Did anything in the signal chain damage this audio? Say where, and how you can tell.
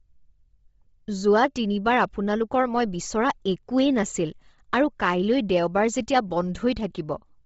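Yes. The damage happened at the codec stage. Across the whole clip the speech has a breathy, grainy edge, and nothing is present above 7.7 kHz. The upper band sounds filled with hiss rather than real detail. That points to Bluetooth LC3 compression as the likely cause. At a low bitrate, around 24 kbps with short 7.5 ms frames, this codec zeroes much of the top spectrum and fills it with noise. Here the damage is heavy.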